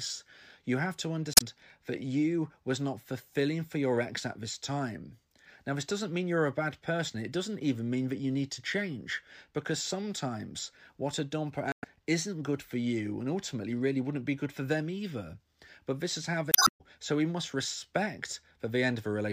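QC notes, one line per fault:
1.32–1.42 s, 11.72–11.85 s and 16.50–16.81 s, damaged data in a compressed stream: brief glitches break into the speech after "you have to", "sometimes what a dumper" and "this is how", as the decoder misreads corrupted frames, loses sync and searches for the next frame header.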